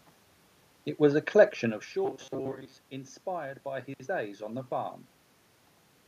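From 2.05 s to 2.86 s, between "was a collection of" and "inspired by his days", robotic sound from repeated short buffers: a rigid metallic buzz at 134 Hz. Audio likely arrived too seldom, so roughly 7.5 ms segments were replayed in place of most real speech.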